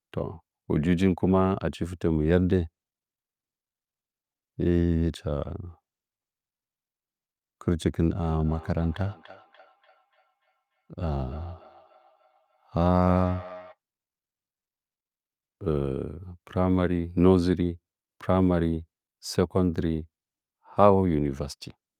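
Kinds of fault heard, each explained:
Feedback echo between two devices: two devices in the same room are on one call, so one plays back what the other's mic sent, and that mic picks it up again. Each echo canceller only cleans up its own playback, so the loop survives. Here, from about 8.23 to 13.77 s, the speech comes round again roughly every 0.3 s, peaking at about 19 dB below the speech itself.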